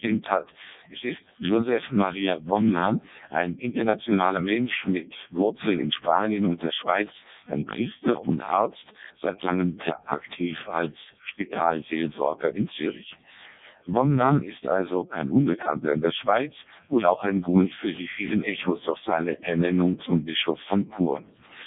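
From start to finish the speech has passed through the Codec 2 vocoder. Instead of keeping the waveform, the codec transmits only pitch, voicing, energy and a rough spectral envelope, and the decoder rebuilds the voice from sine waves. The damage is heavy, pointing to its lowest mode of around 0.7 kbit/s. The result sounds robotic and buzzy, with nothing above 3.8 kHz.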